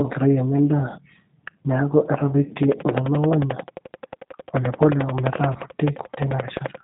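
From start to end, the speech carries plainly audible G.729 codec damage. The band runs from about 150 Hz to 3.7 kHz, with nothing above. The sound points to an 8 kbit/s coder rebuilding each frame from a filter and a few pulses. Speech sounds rough and synthetic.

From 5.53 to 5.57 s comes VoIP packet loss concealed by the speech codec. About 20 ms of audio is missing, which fits one lost packet. The decoder repeats its last pitch and filter at falling gain. A brief stretched, fading sound results, and the sound stays weak just afterwards.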